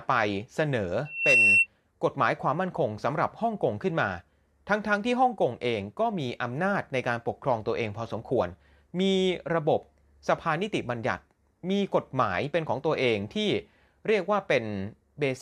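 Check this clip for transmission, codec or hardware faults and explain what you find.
One fault: a loudspeaker feedback squeal from 1.05 to 1.67 s. The microphone picks up its own loudspeaker, and the loop gain exceeds one at 2.7 kHz, so that tone swells over about a third of a second to roughly 10 dB above the speech. A steady interference whistle would start at full level instead of growing like this.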